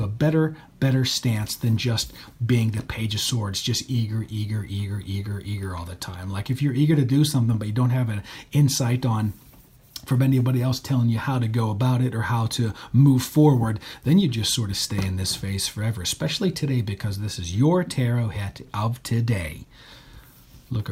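From about 0.52 s to 20.79 s the sound carries a faint, uneven wobble in pace: small hiccups recur at irregular intervals, each barely noticeable, and the whole stretch feels slightly dragged. These are repeated timing corrections. The receiver keeps repeating tiny slices of audio so playback keeps going, which leaves the material running at 98% speed and adds roughly 0.4 s over the span. Each edit goes the same way, lengthening rather than shortening, but the spacing between them wanders.

The underlying fault, present for the whole clip, is clock drift between sender and receiver. The sending device's audio clock runs about 2 percent slower than the receiver's, so data arrives a little behind the rate it is played out. The jitter buffer steadily drains, and the receiver has to stretch the audio with those small repeats instead of letting the buffer empty and fall silent.

Between about 17.10 s and 18.06 s there are a few brief ticks or slight smears, roughly three of them, each very short, the longest around 10 ms. 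These are scattered short gaps where a handful of packets went missing or arrived late. The receiver covered each hole by extending the sound just before it, concealing only a tiny fraction of that second, so the audio stays clear apart from those momentary blemishes.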